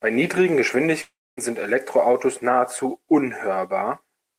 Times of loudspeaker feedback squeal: none

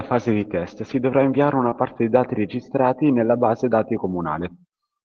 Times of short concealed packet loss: 0.33-0.37, 1.69-1.73

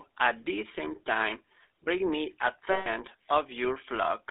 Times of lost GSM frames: 2.72-2.88

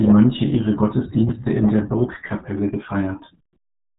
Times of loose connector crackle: none

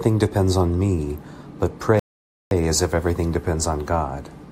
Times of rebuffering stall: 1.99-2.51

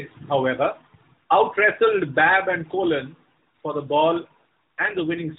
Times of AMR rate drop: 4.78-5.38

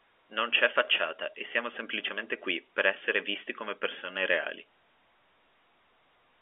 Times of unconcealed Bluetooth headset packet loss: none

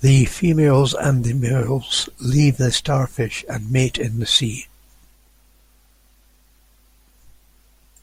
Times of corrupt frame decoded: none

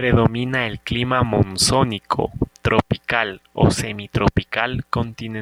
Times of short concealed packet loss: none

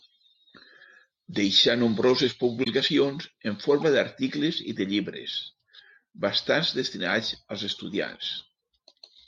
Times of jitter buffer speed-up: none

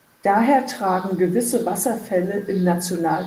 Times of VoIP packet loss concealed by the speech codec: none

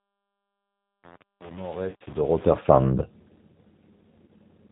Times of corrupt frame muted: none

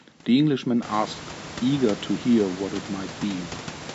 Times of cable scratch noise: none

